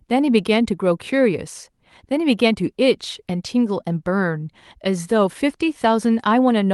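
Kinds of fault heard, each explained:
Nothing here counts as a fault: the speech simply comes over a call connection, carrying the usual coding texture and with the highs tapering off around 12 kHz, which is just how that kind of line sounds.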